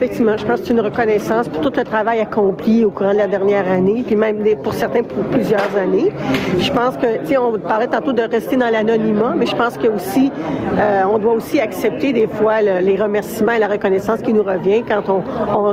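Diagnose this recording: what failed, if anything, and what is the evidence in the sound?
Gain pumping runs through the whole recording: the gain swings by around 15 dB, leaving a squashed, level-flattened result. The likely cause is input gain set far too high, with a fast limiter or compressor hauling it down on each peak.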